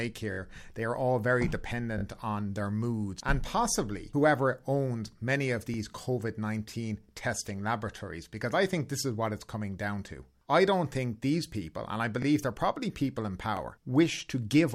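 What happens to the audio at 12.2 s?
At 12.22 s there's a repeated buffer running to about 12.25 s. The next chunk of audio didn't reach the output in time, so the device replayed the last one once more. That piece is about 21 ms long, which fits a 1024-sample buffer, and you hear it twice with a hard join between them. It comes across as a quick stutter in the speech, almost a tiny click, but nothing is actually dropped.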